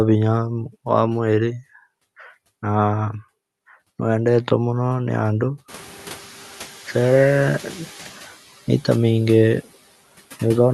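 From 5.68 s to 8.12 s the background noise swells through with less reduction at first, then sinks by about 7 dB. This is the noise suppressor catching up: room noise jumped around 5.5 s, and its noise estimate took 2.44 s to adapt before pulling the noise back down.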